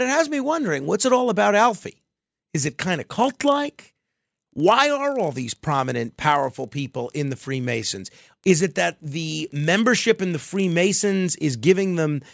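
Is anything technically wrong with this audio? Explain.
Yes. From 2.92 to 10.92 s the resampler is restarted on every block. Each 40 ms block is converted from 48 kHz to 16 kHz in isolation, so its edges lack true neighbouring samples. The resulting edge errors produce a 25 Hz ticking buzz heard only while speech is present.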